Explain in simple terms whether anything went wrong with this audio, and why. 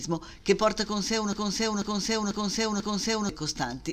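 From 1.33 s to 3.29 s, the audio gets stuck in a broken-record loop. A half-second piece, about 0.49 s long, plays four times in a row. The playback most likely stalled and kept repeating its last fragment, so whatever should have played there is missing.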